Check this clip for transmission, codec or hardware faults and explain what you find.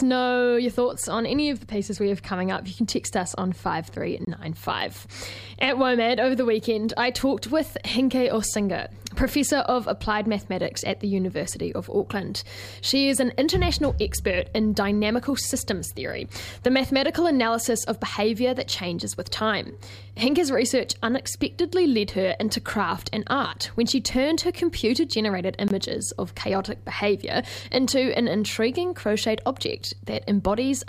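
Two brief dropouts, both the same fault. A block of digital silence occurs at 4.25–4.27 s and again at 25.68–25.70 s. Each hole lasts 23.2 ms, which fits a 1024-sample output buffer left unfilled. The audio cuts out and back with no fade, leaving a short gap.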